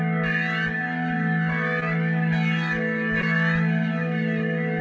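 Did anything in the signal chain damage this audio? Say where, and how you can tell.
Yes: network packet loss, concealed at 1.80–1.83 s and 3.21–3.24 s. About 20 ms went missing each time, bridged by extending the preceding sound, leaving brief smears.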